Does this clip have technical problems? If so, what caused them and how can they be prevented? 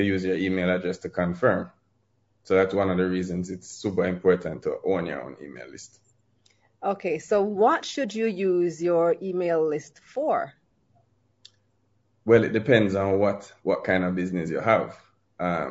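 Yes. Throughout the speech the voice sounds rough and grainy, with noise between the harmonics. This is likely low-delay AAC compression (AAC-ELD), whose short frames resolve pitch harmonics poorly; the damage fits a bitrate around 32 kbps. Prevent it by raising the bitrate or using a standard-delay codec.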